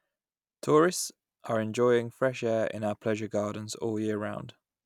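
No technical faults are audible.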